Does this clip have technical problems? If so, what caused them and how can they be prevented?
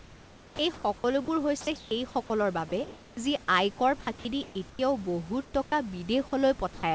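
Yes. Sound chopped by the voice detector at 0.74–1.28 s and 4.01–4.79 s: speech flickers in and out, likely because the sender's detector toggled repeatedly. The repeated switching separates it from a single clean drop. Raising the detector's sensitivity or adding hangover time would prevent it.

Sound dropped by the voice detector at 1.61–1.67 s, 2.69–2.72 s and 6.74–6.83 s: quiet speech gives way to steady noise once, likely because the detector judged it background. Unlike chopping, each is a single short gap. Lowering the detector's speech threshold would prevent it.

Comfort noise in place of the background at 1.61–1.91 s, 2.69–3.17 s and 5.45–5.54 s: the real room noise, which sits about 25 dB below the speech, becomes featureless hiss, likely synthetic fill during discontinuous transmission. At 5.45 s the hiss is about 4 dB quieter. No speech is lost here, only background texture. 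Disabling discontinuous transmission would prevent it.

The call path's G.722 coding, with nothing above 8 kHz, is its normal bandwidth limit rather than a fault.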